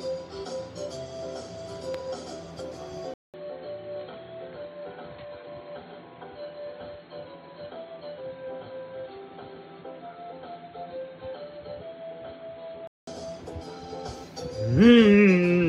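Input switched to a poorer device from 3.14 to 13.07 s: after a 200 ms gap the sound turns dull, nothing above 4.2 kHz, slightly quieter with faint new noise, likely another microphone.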